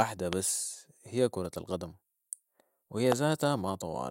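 A speech recording carrying two loud pops, at 0.33–0.35 s and 3.12–3.14 s, each a single sharp burst about 20 dB above the speech, which continues beneath. The likely cause is an electrical pulse from a plug, switch or static. On a waveform each is a tall narrow spike, and on a spectrogram a thin vertical stripe spanning all frequencies.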